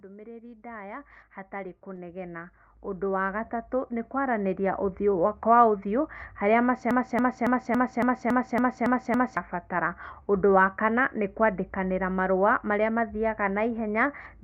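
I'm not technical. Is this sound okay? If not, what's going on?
No. From 0.05 to 5.08 s there is automatic gain rising. The volume control in the recording chain judged the input too quiet and kept turning it up, so the speech and the background grow steadily louder together over those five seconds.

From 6.91 to 9.37 s there is a broken-record loop. The player or stream likely stalled and kept resending the last scrap it held, so a piece about 0.28 s long repeats nine times back to back, and the speech that belonged there is lost.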